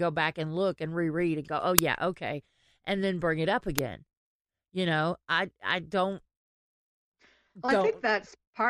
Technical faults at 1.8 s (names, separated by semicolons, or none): uninitialised buffer